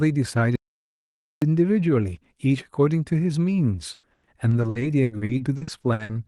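From 0.56 to 1.42 s the speech falls into an audio dropout to silence, losing about 0.86 s, likely because the input was interrupted while recording carried on. The gap is silent with no room tone, unlike a natural pause.

From 3.75 to 6.11 s, repeated packet loss gives the speech a choppy, robotic quality. Around nineteen short holes, the longest about 100 ms, are filled by stretching the preceding sound, so roughly a third of this span is concealed rather than left silent.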